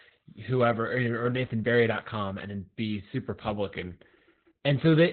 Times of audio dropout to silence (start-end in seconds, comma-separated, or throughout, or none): none